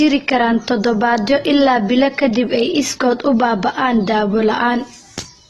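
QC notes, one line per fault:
Throughout: AAC compression. Nothing is present above 12.1 kHz, and the speech sounds dull and smeared, with a warbling, fizzy edge on sibilants and sustained sounds. This is likely AAC-LC at a low bitrate, around 32 kbps. An encoder short of bits lowers its cut-off, drops or roughly quantises weaker spectral detail in each frame, and patches gaps with substitute noise, so high frequencies vanish and the texture shifts from frame to frame.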